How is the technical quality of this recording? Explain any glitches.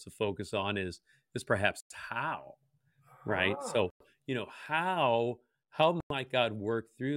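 The recording has a recurring glitch: a gap between chunks, heard three times. The holes fall at 1.80 to 1.90 s, just after "on is is perhaps", at 3.90 to 4.00 s, just before "you know", and at 6.00 to 6.10 s. Each is a 100 ms silence. They repeat every 2.1 s. The speech seems to arrive in 2-second blocks, with dead air inserted at each join. Nothing is cut out. The flow simply stops briefly, then resumes.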